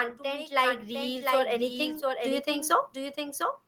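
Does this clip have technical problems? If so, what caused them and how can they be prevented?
Yes. A doubled audio track runs through the whole clip: a second, full-band copy of the speech trails the original by roughly 0.7 s at around 10 dB lower, with no reverberant tail or room colour. It most likely comes from a second, slower capture path being mixed in. On a spectrogram every syllable's pattern reappears, fainter and shifted right by the same gap. To prevent it, route the source through a single path and mute any duplicate monitor or loopback feed.

Automatic gain rising appears from 0.17 s to 3.46 s. The gain control judged the input too quiet and raised its gain steadily by about 15 dB, so the speech and the background noise swell together over those three-plus seconds. On a waveform the envelope widens gradually across that span, and the noise floor between phrases climbs along with the speech peaks. 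To prevent it, turn off automatic gain control and set a fixed input level before recording.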